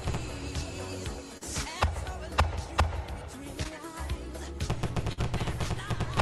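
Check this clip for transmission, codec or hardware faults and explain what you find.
Three network faults occur, all losses of audio in transit rather than codec or hardware problems.

Short concealed packet loss occurs at 1.37 to 1.43 s and again at 3.63 to 3.67 s. About 40 ms and then 20 ms of audio never arrived in time. The receiver covered each hole by carrying the preceding sound forward for 36 and 16 ms, then blending back into the real signal, leaving a brief smear or wobble. These gaps are single and short, and the audio picks up just past the missing stretch.

A burst of packet loss occurs at 5.13 to 5.19 s. A run of about 40 ms went missing together, and the receiver extended the last sound for 47 ms while turning it down, so it comes across as a held buzz or fading hiss rather than a smear. As with the two short losses, the audio resumes further along, with the stretch in between gone.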